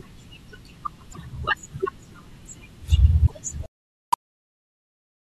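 Speech, with two short breaks at 1.12–1.18 s and 3.25–3.32 s where the audio jumps ahead and the next frames come out as a chirp, a burst of noise or a short hole, likely a broken MP3 bit reservoir after dropped 24 ms frames. On a spectrogram each shows as a vertical smear or gap about 64 ms wide. From 3.66 s to the end, the quiet parts turn gritty and sputtery, with distortion that follows the signal at about 20 dB below it, which fits coarse 4-bit rounding: low bit depth without dither. The waveform looks stair-stepped, and the spectrogram shows a broadband haze that tracks the speech.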